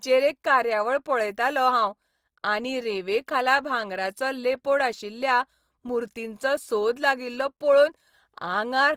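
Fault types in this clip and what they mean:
Opus compression: Throughout, the speech sounds plainly grainy and rough, with tonal parts turned noisy rather than hollowed out, while the bandwidth still extends to about 20.2 kHz. The likely cause is Opus in its fullband CELT mode, which fits a rate near 24 kbps.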